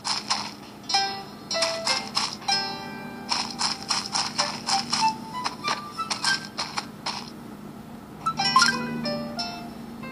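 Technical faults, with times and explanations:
No technical faults can be heard anywhere in the recording.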